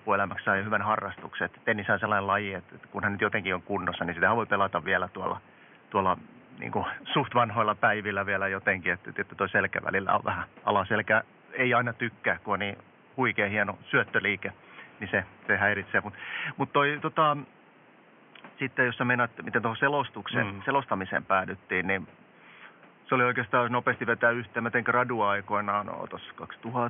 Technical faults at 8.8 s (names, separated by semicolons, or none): none